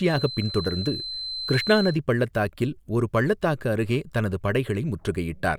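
A feedback whistle runs from 0.0 to 2.0 s, a thin, steady tone at 4.1 kHz sitting roughly 10 dB below the speech and swelling and fading slowly in level. It stops just before "பள்ளத்தாக்கில் ஒரு பள்ளத்தாக்கு அருகே". The cause is likely a loudspeaker-to-microphone loop held right at its gain limit, so a single frequency keeps recirculating and sustains itself without building into a full howl.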